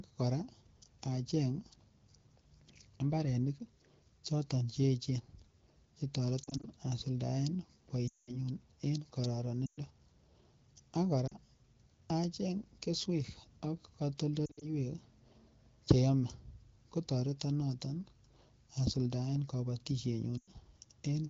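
Lost AMR speech frames occur at 6.43–6.67, 8.07–8.37, 9.66–9.79, 11.27–11.37, 14.46–14.70 and 20.38–20.50 s. Each time, radio errors corrupted the frames, and the decoder kept repeating the last good pitch and vocal-tract settings at falling gain. Short gaps sound like warbles. The 200 ms run at 8.07 s drops to near silence within two frames before the speech returns rough.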